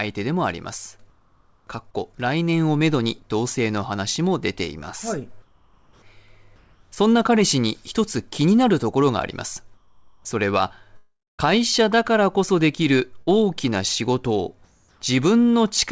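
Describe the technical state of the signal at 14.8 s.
At 14.8 s the sender has likely stopped transmitting during a pause its voice detector judged silent, and the receiver is filling the gap with comfort noise in place of the background, from 14.65 to 15.01 s. For those 0.36 s the real background, already about 34 dB below the loudest speech, becomes a steady, featureless hiss about 3 dB quieter and without its earlier texture. Like the rest of the call, it carries nothing above 8 kHz.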